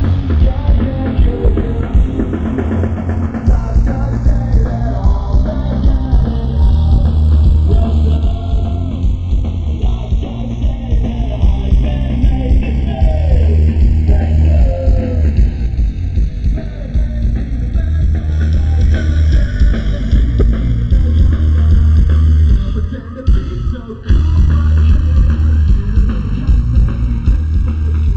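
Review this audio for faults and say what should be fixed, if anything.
Channels drifting apart runs through the whole recording. The left and right channels appear to come from devices running on separate clocks that disagree by something like 30 ppm, so the offset between them keeps growing and reaches about 0.7 ms by the end. When the channels are summed to mono, this shifting delay produces a slow flanging sweep. On a spectrogram of the mono sum, comb-filter notches glide gradually downward in frequency. To prevent it, lock both devices to a common word clock, or resample one channel to match the other before mixing.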